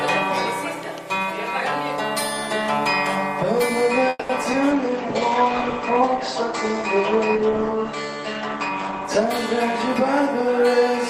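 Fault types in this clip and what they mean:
call audio freeze: From 4.09 to 4.31 s the last sound is stretched into a fading buzz for about 0.2 s, likely because delayed packets emptied the jitter buffer. The spectrogram shows frozen horizontal streaks decaying, and the waveform has a brief near-silent dip before the audio resumes intact.
short concealed packet loss: Two brief holes, at 4.43 s and 4.52 s, where roughly 40 ms and 20 ms of audio never arrived. The receiver bridged each with a short extrapolated patch, heard as a quick smear or wobble. Each shows as a blurred, slightly mismatched sliver in the spectrogram.
call bitrate drop: From 4.72 to 10.12 s the encoder falls from 32 to 13 kbps and its bandwidth narrows from 20 kHz to 8 kHz. The sound turns muffled and coarse. A spectrogram shows everything above 8 kHz abruptly cut off, with grainier, blockier texture below.
jitter buffer speed-up: Between 9.55 and 10.90 s the receiver trims surplus buffered audio by cutting out tiny pitch-period pieces, about 40 ms in total. 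Playback runs about 2% fast at unchanged pitch. The waveform looks marginally compressed in time, with nearly invisible splices between cycles.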